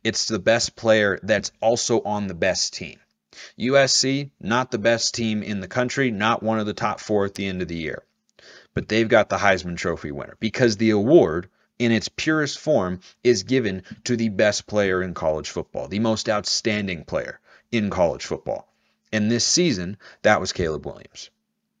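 No technical faults can be heard anywhere in the clip.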